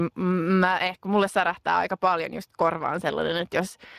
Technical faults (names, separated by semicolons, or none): Speex codec